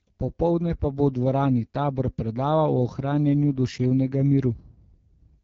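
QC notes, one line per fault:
Throughout, AMR wideband (HD Voice) codec: the speech has that plainly rough, raspy edge you get when the vocal tract model runs short of bits, and the roughness and thin detail point to one of its two lowest modes, most likely around 8.85 kbit/s. Above 6.4 kHz there's only shaped noise standing in for real detail, and past about 7.6 kHz there's nothing at all, so the top end feels hissy and then just stops.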